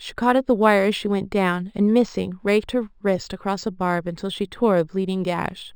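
Throughout the speech, imaging from linear upsampling colours the top of the band. The sound points to a 12 kHz original raised to 48 kHz by joining samples with straight lines, a poor filter that leaves a mirrored copy of the spectrum between 6 kHz and 12 kHz, roughly 30 dB below the signal. Sibilants carry a faint metallic shimmer over a dulled top. Plain low-pass dulling has no such shimmer, and aliasing folds energy downward rather than mirroring it upward.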